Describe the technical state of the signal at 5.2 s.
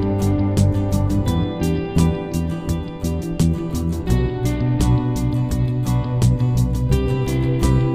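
At 5.2 s the signal is intact, with no dropout, distortion, glitch or other audible fault at that point.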